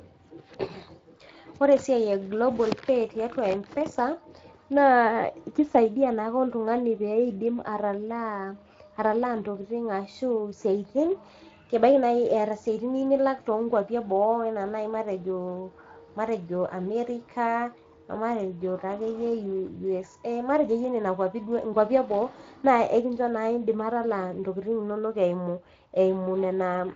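Speech carrying plainly audible Speex codec damage throughout, with a noisy, hoarse CELP texture from a thin excitation budget, consistent with a mid-rate setting near 20 kbps.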